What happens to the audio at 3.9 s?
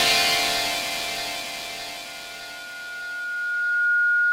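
At 3.9 s a loudspeaker feedback squeal is sounding: a steady 1.4 kHz tone that began at 2.05 s and swells over roughly two seconds to about 5 dB above the programme, lasting to the end. The microphone is re-amplifying its own loudspeaker with loop gain above one.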